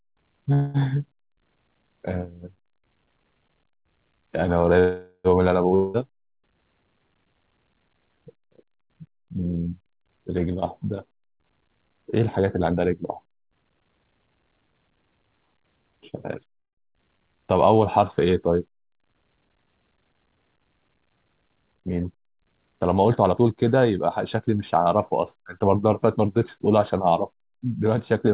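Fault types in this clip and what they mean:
call audio freeze: At 0.53, 4.79 and 16.58 s the speech stops and the last sound trails on as a fading buzz for about 0.21, 0.45 and 0.2 s, the later two ending in brief silence. Speech then resumes where it stopped. Likely cause: delayed packets emptied the jitter buffer.
long network dropout: From 5.75 to 5.97 s the speech gives way to a fading buzz of about 0.19 s, then returns further on with roughly 0.18 s of speech never heard. Likely cause: no packets arrived for that stretch, so the receiver filled the gap and the lost audio was never played.
jitter buffer speed-up: From 10.38 to 14.95 s the speech runs hurried at about 115% speed with unchanged pitch, shedding roughly 0.7 s. From 23.1 to 25.75 s it runs at about 108%, losing roughly 0.2 s. The receiver trimmed short pitch-period pieces to shrink excess buffered delay.
skip ahead: At 16.92–16.96 s playback jumps forward almost seamlessly, with only an 8 ms fill at the join, and roughly 70 ms of speech is simply gone. 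A stretch of audio was dropped while later audio was already waiting, so the two sides were butted together.
jitter buffer slow-down: From 16.98 to 17.41 s the speech drags at about 85% speed, its pitch unchanged, with sounds drawn out as 72 ms is added. The receiver repeated single pitch periods to rebuild its reserve right after the freeze and skip.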